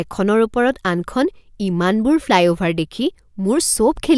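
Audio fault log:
No fault can be heard anywhere in this speech clip.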